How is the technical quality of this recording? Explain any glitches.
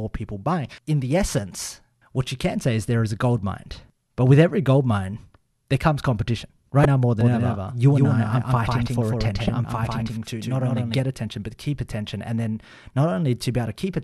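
The recording has three glitches in the speech: two brief bursts of damaged data in a compressed stream, and a stretch where the audio is doubled.

At 6.82 to 6.85 s, just after "mine there comes competition" and before "now more", a short glitch cuts in. A second, similar blip comes at 9.46 to 9.49 s. Both are damaged data in a compressed stream: corrupted bytes leave the decoder unable to read those frames correctly, so it loses sync and hunts for the next valid frame header. The result is an artificial blip lasting a few tens of milliseconds.

From 7.21 to 11.00 s, starting after "now more" and ending before "attention but keep attention", the speech sounds doubled. A second, full-band copy trails the original by around 150 ms at about 5 dB lower. This is a doubled audio track, likely from the signal being captured a second time along a slower path. The copy has no decay or room colour, unlike a real echo, and it switches on and off abruptly at the edges of that stretch.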